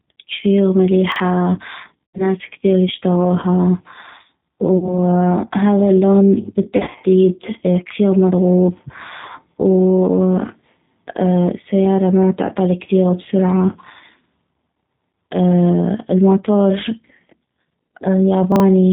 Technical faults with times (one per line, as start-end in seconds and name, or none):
0.00-18.93 G.729 codec
1.12-1.20 chunks out of order
2.09-2.30 VoIP packet loss concealed by the speech codec
4.78-4.99 VoIP packet loss concealed by the speech codec
6.76-7.04 VoIP packet loss concealed by the speech codec
18.52-18.60 chunks out of order